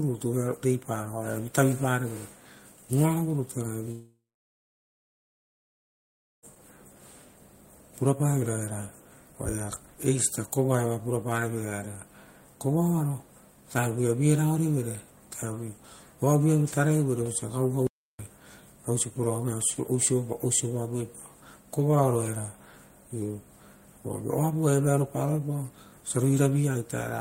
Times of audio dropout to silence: 17.87-18.19

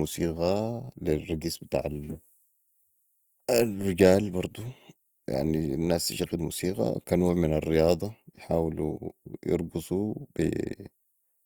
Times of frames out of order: none

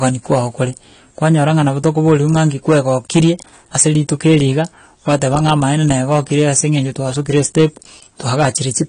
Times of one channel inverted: none

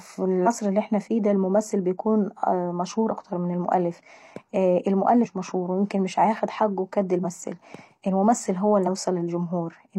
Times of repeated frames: none

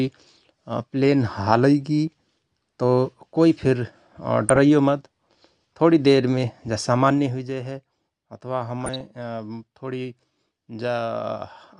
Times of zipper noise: 7.06-7.59

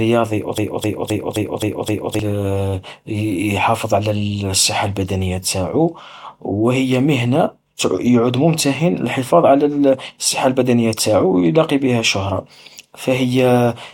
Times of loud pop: none

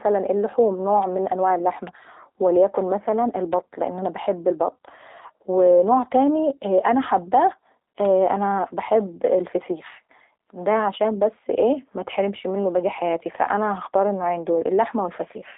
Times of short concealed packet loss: none

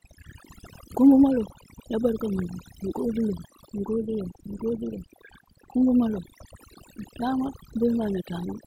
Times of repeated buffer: none

